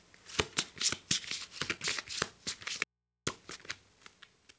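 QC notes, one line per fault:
1.60 s, skip ahead: the sound jumps forward with no gap, and about 0.4 s of audio is missing. A backlog of later audio was already queued, so the stretch was dropped and the two sides were joined almost directly. That removed roughly 400 ms of delay.
1.77–3.97 s, jitter buffer speed-up: playback runs at about 107% with unchanged pitch and sounds hurried. The buffer held more audio than its target, so it repeatedly cut out pitch-period-length pieces, roughly 150 ms in total, to reduce latency.
2.84–3.27 s, audio dropout to a faint residue: the sound cuts out abruptly for 0.43 s, leaving only hum about 55 dB below the signal, then returns mid-flow. The likely cause is loss of the wanted signal while the downstream path stayed live, so the open input's hum shows through. The hum sits under the call codec's band limit, with nothing above 8 kHz, which fits G.722 at 64 kbps.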